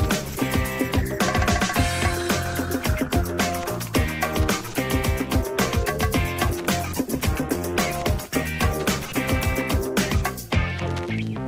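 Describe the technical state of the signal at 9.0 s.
At 9.0 s the signal sits inside a call bitrate drop running from 6.54 to 11.29 s. The encoder's rate fell from 48 to 15 kbps, so the coding is coarser and the high frequencies are cut off. The sound turns rough, watery or muffled but stays continuous, with no gaps as with packet loss, before clearing near the end.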